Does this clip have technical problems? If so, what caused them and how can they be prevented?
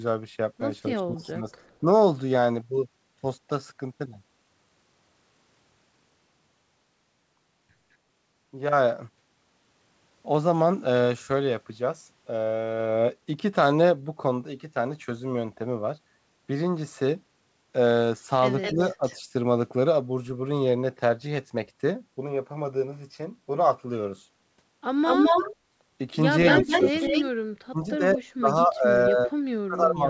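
Yes. At 0.96 to 1.86 s, 18.75 to 19.03 s and from 26.6 s to the end, the speech dips by up to about 30 dB, likely speech suppressed in double talk: the echo canceller turned down everything while both sides talked. Better echo cancellation that tolerates double talk, or headsets, prevents this.

A delayed copy of the speech returns at 1.2 to 1.76 s (264 ms, about 35 dB down), 18.62 to 19.21 s (212 ms, about 10 dB down) and 25.05 to 28.64 s (212 ms, about as loud as the speech). This is likely an echo leak: loudspeaker sound picked up by a microphone slipped past the echo canceller. Headsets or lower loudspeaker volume prevent it.

The G.722 call path at 64 kbps carries nothing above 8 kHz.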